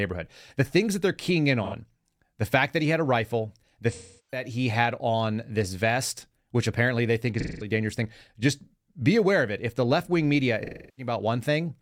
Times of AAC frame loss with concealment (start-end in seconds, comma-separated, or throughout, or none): 1.63-1.74, 3.91-4.43, 7.40-7.71, 10.64-11.12